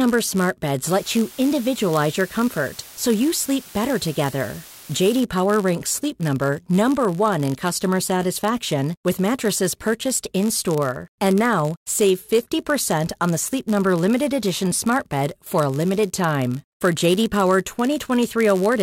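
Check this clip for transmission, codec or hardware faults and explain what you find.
Two faults are present in this speech clip.

Throughout, a block size mismatch (padded) puts a buzz at 91.5 Hz. Each block written is shorter than the block read, so a stretch of zeros fills every block. That leaves a brief gap at the block rate. The speech also runs at 0.996 times normal speed with its timbre unchanged. A sample-rate mismatch would shift the pitch, and mains hum would be a smooth tone rather than the rough pulsing of regular gaps.

From 0.87 to 5.21 s, low bit depth with dither reduces the signal to 6 bits. Dither added before rounding turns the quantisation error into a steady, even hiss about 20 dB below the speech, with no distortion. Without dither, the same coarse rounding would sound gritty and would change with the signal.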